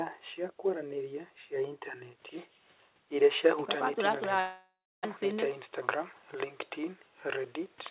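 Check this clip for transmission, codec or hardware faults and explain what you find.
Two transmission faults are audible in this speech clip, both from the network side of a call. The sound is narrowband throughout, with nothing above 4 kHz, which fits a telephone-grade codec such as G.711 at 64 kbps.

Long network dropout, from 4.40 to 5.07 s. The speech breaks off and is replaced by a fading buzz from the last sound. Near the end, about 0.29 s of that stretch is plain silence. The likely cause is a run of packets that never arrived. The receiver stretched the final sound to cover the hole, then gave up. When speech resumes, roughly 0.6 s of it is simply gone. The timing shifts slightly afterwards.

Jitter buffer speed-up, from 5.69 to 6.45 s. The speech runs about 4% fast, at unchanged pitch. The buffer held more audio than it wanted. To shed that delay, the receiver cut many tiny slices, each one or a few pitch periods long. 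Together they add up to about 40 ms. The pitch stays put because whole cycles are removed rather than the audio being resampled.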